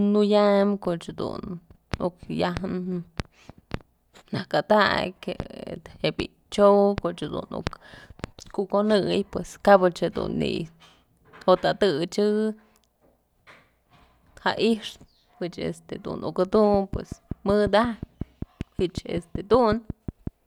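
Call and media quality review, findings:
Train of clicks, 16.74–20.28 s after "pëch este uk": about twenty similar ticks at a regular 5.4 per second, peaking around 10 dB above the speech, continuing through pauses. Likely nearby-equipment interference or a faulty connection or power supply; the even spacing and repeated shape distinguish it from random crackle.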